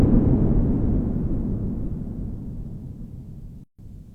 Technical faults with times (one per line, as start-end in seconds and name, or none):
3.64-3.79 gap at a join of encoded pieces